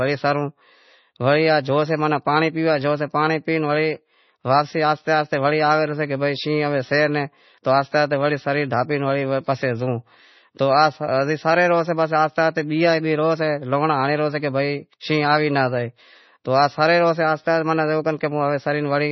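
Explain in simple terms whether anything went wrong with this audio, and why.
Throughout the whole recording the speech sounds dull and watery, with a heavy swirling, underwater quality and sizzly, metallic edges on s sounds. Nothing is heard above about 5.9 kHz, so the crisp top end is simply missing. The likely cause is heavy MP3 compression: squeezed too hard, the encoder threw away the treble and kept only the parts it judged important, letting faint details flicker in and out.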